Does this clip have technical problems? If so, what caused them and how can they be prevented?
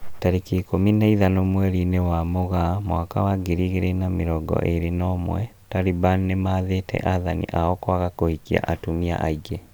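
No, this clip has no technical problems, so there is no cause to find and nothing to prevent.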